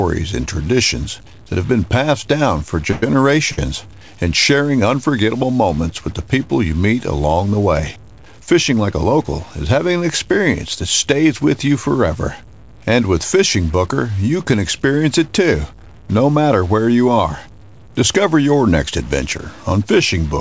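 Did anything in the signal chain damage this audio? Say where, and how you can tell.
Yes. Stuck bit, throughout the 20 s of speech: there is noise or distortion riding on every sound, and the pauses are not clean but filled with a hiss that flips with the tiny residual signal. That points to a converter or its data lines, likely one bit held fixed, so roughly half the samples are shifted by that bit's weight in a pattern the waveform dictates.

Call audio freeze, 2.91 to 3.16 s, right after "been passed down for": the last sound is carried on as a fading buzz or hiss for about 112 ms, then the speech resumes exactly where it left off with nothing skipped. This sits in the network and buffer stage: packets were likely delayed, the jitter buffer drained, and the receiver concealed the wait, inserting a gap instead of dropping audio.

Short stall from a late packet, 3.52 to 3.59 s, still just after "been passed down for": a sound is held about 58 ms too long before the speech carries on intact. 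One packet missed its playout deadline, so the jitter buffer ran dry and the receiver stretched the previous audio until it arrived, adding delay but losing nothing. This is separate from the earlier freeze.

Jitter buffer speed-up, 8.76 to 9.05 s, just before "is having an experience": the speech briefly runs at about 112% of normal speed with unchanged pitch, sounding hurried. The buffer was holding excess audio, so the receiver trimmed short pitch-period slices, around 40 ms in total, to pull the delay back down. The G.722 call path at 64 kbps is also present, audible as nothing above 8 kHz.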